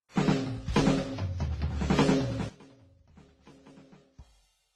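Transcoding between lossy codecs runs throughout this music: stacked smearing and swirly artefacts with nothing above 12 kHz, likely from a low-bitrate WMA encode re-encoded to Opus. One channel inverted from 2.49 s to the end at 4.75 s: the sound likely collapses when summed to mono, dropping about 29 dB to a faint residue.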